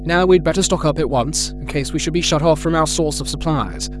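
Under the speech there's a steady mains hum sitting at 50 Hz for the whole clip, and it's loud, roughly 10 dB below the voice level, so it's hard to miss. That points to a ground loop or a transformer close by bleeding the power line into the signal.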